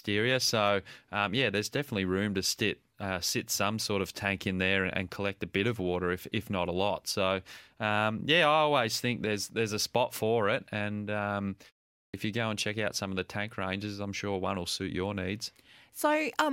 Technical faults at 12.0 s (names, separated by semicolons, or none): clipped start after a pause